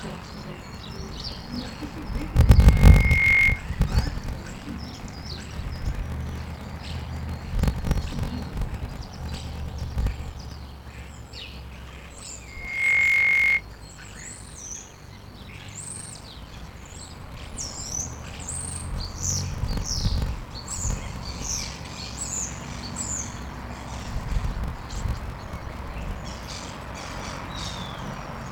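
From start to finish there is a block size mismatch (padded): one stage hands over blocks shorter than the 1024 samples the next stage reads, and the shortfall in each block is filled with silence. The figures fit blocks of roughly 882 samples against 1024 at 48 kHz. Every block therefore carries a small gap, producing a steady buzz at 46.9 Hz, and the audio plays at 0.861 times its normal speed while keeping about its normal pitch.

From 2.56 s to 3.66 s a loudspeaker feedback squeal appears. A microphone picks up the loudspeaker it feeds, and at 2.2 kHz the loop gain rises above one, so that single frequency keeps reinforcing itself. It swells over about three quarters of a second into a piercing tone about 10 dB above the programme. The same 2.2 kHz squeal returns from 12.47 s to 13.63 s, reaching full strength faster, in about a third of a second.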